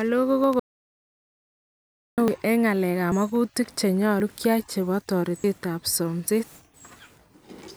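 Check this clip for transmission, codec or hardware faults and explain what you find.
Two hardware-type faults are audible in this speech: a run of dropped buffers and one long dropout to silence.

Dropout to silence, from 0.60 s to 2.18 s: the signal vanishes completely for about 1.58 s, with no room tone left, and then returns mid-flow. The likely cause is an input that was briefly lost, such as a failed link or a momentary mute, while the recorder kept writing silence. On a waveform this is a dead-flat line. On a spectrogram it is a solid black band across all frequencies, with hard edges at both ends.

Dropped buffers (overrun), at 0.44, 2.28, 3.12, 4.2, 5.44 and 6.28 s: each one is a jump in the speech. The one at 2.28 s falls just before "en ng'alek". The one at 4.2 s falls just before "kyai chebo", and the one at 5.44 s comes just after it. Most skips are around 40 ms. The skip at 4.2 s is nearer 70 ms, and the one at 6.28 s is about 100 ms. 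The likely cause is the software failing to collect its samples in time, so that a chunk was overwritten and the two sides were spliced together. There is no gap: the waveform shows an abrupt discontinuity, and the spectrogram shows a thin vertical broadband line where the patterns fail to line up.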